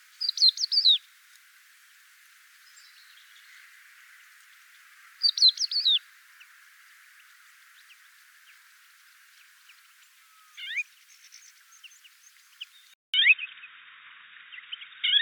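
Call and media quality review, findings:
Sound turns dull and boxy from 12.94 s to end, after a 200 ms dropout at the switch; nothing above 3.8 kHz, level down about 5 dB, faint new noise floor. Likely input switched to a poorer device, e.g. headset call profile.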